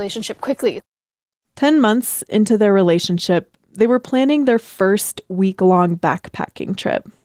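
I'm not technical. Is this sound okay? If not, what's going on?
Yes, nothing in this recording sounds wrong.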